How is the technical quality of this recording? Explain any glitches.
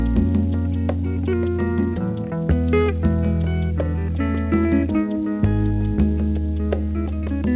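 No glitches to report: the audio comes through a normal call path, with nothing above 4 kHz and the narrowband character of a 64 kbps G.711 A-law telephone codec.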